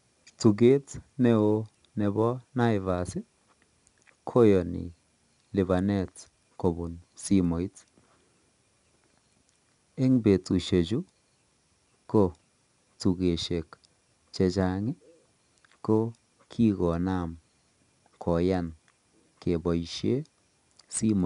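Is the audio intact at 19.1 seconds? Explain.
No. At 19.1 s, as throughout, the speech carries 4-bit ADPCM compression. Each sample is coded as a coarse 4-bit step from a prediction, so a gritty hiss rides on the louder syllables and sharp onsets sound rough. Unlike low-bitrate MP3, there is no watery swirl. The band stops near 10.6 kHz, consistent with about 88 kbps.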